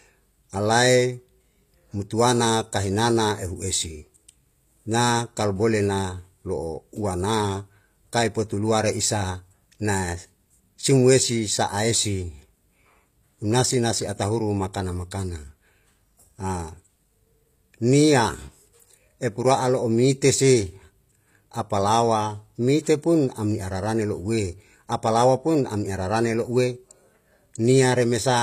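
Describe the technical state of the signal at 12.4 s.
At 12.4 s the speech carries the same damage heard through the whole clip, and it is plainly audible. The treble sounds synthetic. S sounds come out gritty and lispy, with a metallic edge. Nothing remains above about 14.9 kHz. The likely cause is HE-AAC compression at a low bitrate, fitting roughly 24 kbps. Only the lower spectrum is truly coded. The upper bands are copied up from below and roughly reshaped, so their harmonics no longer line up.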